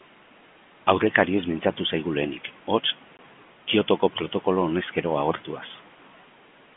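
At 3.17 s the speech drops out for about 20 ms, a case of packet loss filled with silence. The receiver had nothing to play for that stretch and inserted silence, consistent with two 10 ms packets going missing. Unlike concealment, which smears or repeats the preceding sound, this gap is silent, with abrupt edges. The telephone band of the G.711 line, 150 Hz to 3.4 kHz, carries on unchanged around it.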